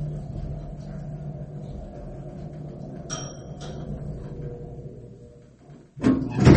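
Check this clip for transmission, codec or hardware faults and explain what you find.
One fault runs through the whole clip: MP3 compression is the likely cause. Nothing is present above 8.4 kHz, and quiet detail flickers with a watery, swirling texture. That points to an encoder starved of bits, consistent with roughly 32 kbps, which cuts the treble and drops weak frequency lines from frame to frame. Unlike a plain low-pass filter, the loss is unstable: faint components pop in and out, and attacks smear.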